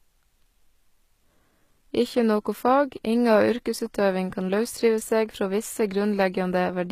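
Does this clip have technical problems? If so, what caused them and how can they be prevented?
Yes. Throughout the speech, the treble sounds bright but synthetic, with gritty, metallic s sounds and nothing above about 14.9 kHz. This is likely HE-AAC compression at a rate that fits roughly 20 kbps. The codec encodes only the lower band and rebuilds the top by copying it upward, so harmonics don't line up. A plain low-pass filter would instead leave the top dull. Encoding at a higher bitrate with standard AAC prevents this.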